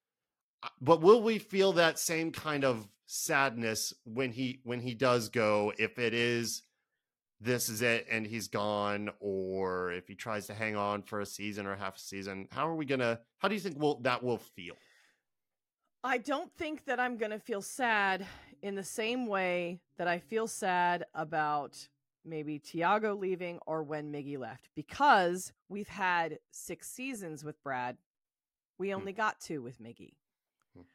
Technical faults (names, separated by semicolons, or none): none